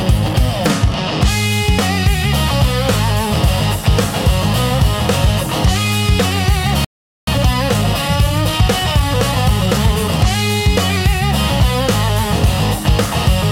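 The audio cuts out at 6.85 s and stays silent until 7.27 s, a playback stall of about 0.43 s, likely the player running dry or its thread getting blocked. From 7.27 to 10.27 s you get time-compressed catch-up: the player trims and cross-fades small slices to clear the backlog, so the sound runs about 1.1 times fast at normal pitch.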